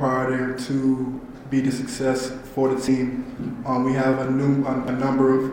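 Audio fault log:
1.16 s, 2.88 s, 4.13 s, 4.88 s: dropped buffer (overrun). Each is a jump with the sound skipping abruptly ahead and no gap of silence. This is likely because samples were overwritten before being read, so a short stretch vanished and both sides were spliced together: about 50 ms lost at three points and roughly 150 ms at 2.88 s.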